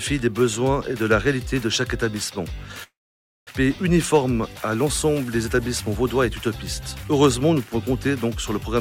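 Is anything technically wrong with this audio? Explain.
Yes, there are two problems.

From 2.83 to 3.64 s there's a long network dropout, likely from a gap in arriving packets. The last sound smears into a fading buzz, then silence, and about 600 ms never returns.

From 4.14 to 4.56 s there's a jitter buffer speed-up. The receiver trims tiny pitch-period chunks, around 40 ms in all, so the audio runs about 7% fast at the same pitch.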